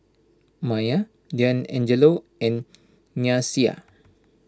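No technical faults are audible.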